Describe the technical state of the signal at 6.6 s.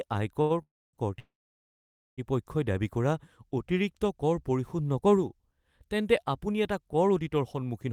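At 6.6 s the speech signal is intact, with no audible fault at that moment.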